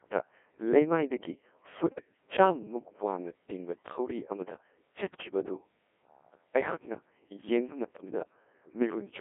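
Throughout, a Codec 2 vocoder rebuilds the speech from sine waves using only pitch, voicing, energy and envelope, which fits about 1.6 kbit/s. It sounds robotic and buzzy, with nothing above 3.6 kHz.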